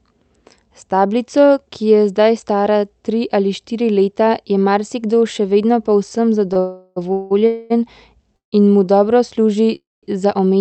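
The speech here is band-limited to about 8 kHz, as from an Opus call path. At 6.53 to 6.57 s, a sound is briefly held for about 21 ms with a slight buzz or dip. This is a short stall from a late packet: the jitter buffer ran dry, the receiver stretched the last sound until the packet landed, then resumed with nothing lost. Straight after come three call audio freezes at 6.59 to 6.98 s (368 ms), 7.12 to 7.32 s (181 ms) and 7.46 to 7.72 s (237 ms), where the last sound is drawn out as a fading buzz or hiss. Two more freezes follow at 8.36 to 8.54 s (161 ms, about 140 ms of it silent) and 9.75 to 10.05 s (273 ms, about 200 ms silent), where the extension decays into silence. The likely cause is packets held up in transit, emptying the jitter buffer so the receiver filled the wait and then carried on from where it stopped. Each freeze inserts a gap without dropping any speech.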